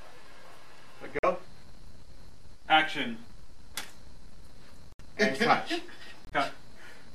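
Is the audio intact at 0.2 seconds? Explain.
Yes, at 0.2 seconds the audio plays through cleanly, with no dropout, click, distortion or other fault at that moment.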